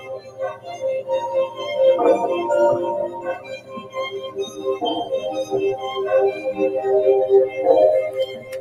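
Throughout, a speech noise suppressor applied to music or sounds treats steady material as noise, so level swings by around 15 dB and sustains thin and pump while attacks pass. Sound cut by the noise suppressor sinks about 11 dB at 0.00–0.76 s, 3.13–3.97 s and 8.10–8.61 s, and about 9 dB at 4.17–4.61 s. Unlike a gate, these are partial dips that cut held tails short.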